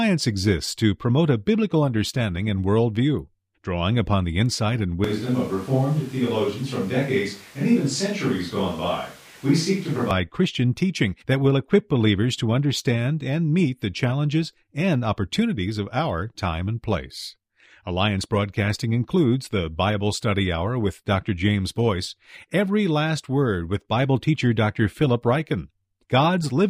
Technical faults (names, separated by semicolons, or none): switch to a distant microphone